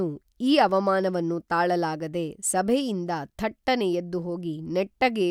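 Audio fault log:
0.69–0.77 s, loose connector crackle: a brief irregular burst of scratchy crackle cuts into the speech. A worn contact making and breaking chops the signal.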